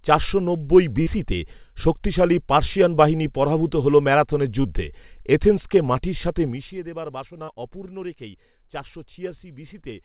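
A speech recording carried over a call link whose band stops at 4 kHz, which points to G.711 mu-law at 64 kbps. It shows short concealed packet loss three times. At 1.02 s, just after "চারশো নব্বই", about 40 ms is missing. At 4.62 s about 20 ms is gone, and at 7.44 s, just before "অপূর্ণ রেখেই চারশো", another 40 ms drops out. The receiver extended the preceding sound across each gap and then blended back, which leaves a brief smear or wobble. From 6.44 to 6.80 s there is zipper noise. The level drops by roughly 15 dB in 2 dB steps at about 20 per second with no smoothing between them, so the fade carries an audible ticking, zipping texture.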